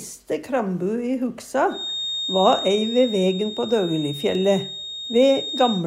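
A feedback whistle runs from 1.66 s to the end of the audio at 5.86 s: a thin, steady tone at 3.7 kHz sitting about 10 dB below the main signal, swelling and fading slowly in level. The likely cause is a loudspeaker-to-microphone loop held just at the edge of instability, so the gain around the loop at that one frequency stays close to unity, sustaining a single ringing tone that neither dies away nor escalates into a howl.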